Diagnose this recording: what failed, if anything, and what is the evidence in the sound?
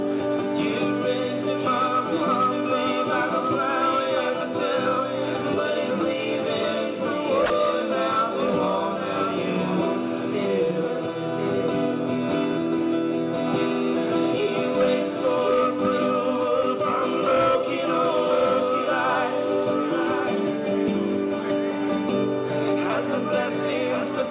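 A doubled audio track runs throughout: a full-band copy follows about a second behind, roughly 5 dB below the original, with no decay or room colour. The likely cause is a second, slower capture path or an edit mixing two offset copies.

At 7.46 to 7.50 s, sound is dropped by the voice detector in the call processing stage. For 40 ms the signal gives way to steady comfort noise, then returns. The sender's detector likely classed that passage as background and stopped transmitting.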